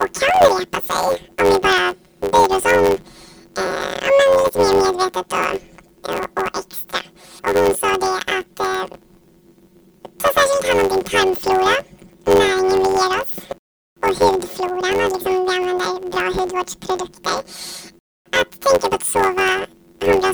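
From start to finish the speech carries a planar audio read as interleaved fault. Blocks of about 10.9 ms, each holding all its left samples and then all its right, are being read as alternating left-right pairs, so every block plays twice at double speed. Because the blocks are so short, this comes across as a robotic buzz at about 92 Hz rather than an octave jump, while the overall pace stays correct, unlike a simple speed or sample-rate error.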